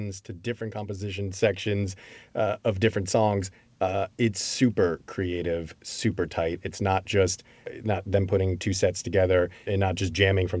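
From 0.26 to 2.05 s, automatic gain rising lifts voice and background together by about 7 dB, settling just before "uh of different songs"; content above 8 kHz is absent throughout.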